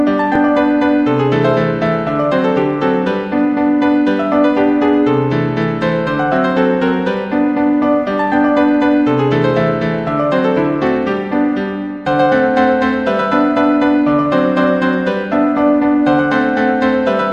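At 0.36 s there is a jump in the sound from a dropped buffer (overrun), likely samples overwritten before being read. Unlike a dropout there is no silence, only a tiny forward skip.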